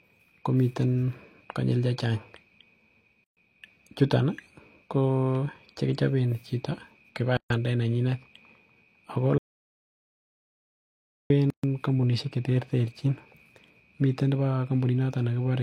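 Separately encoded segments were joined without trimming the encoder's start-up delay and end padding, so each join carries a gap at a join of encoded pieces. The speech stops dead for about 130 ms at 3.24 to 3.37 s, 7.37 to 7.50 s and 11.50 to 11.64 s, a steady 4 s spacing that matches the segment length. Each gap has smeared edges, and the speech resumes exactly where it broke off.

Between the second and third joins, the input signal was likely lost, perhaps through a disconnected device or a failed link, while recording continued writing silence. The result is an audio dropout to silence from 9.38 to 11.30 s, about 1.9 s long. The speech cuts off mid-flow into total silence with no room tone at all, then returns abruptly. Whatever was said during that span is missing.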